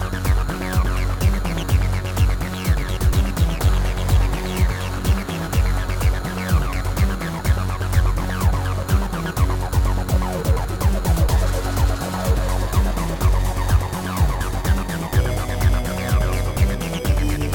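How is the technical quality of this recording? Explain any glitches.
No glitches to explain: the recording shows no dropouts, clicks, distortion or other technical faults.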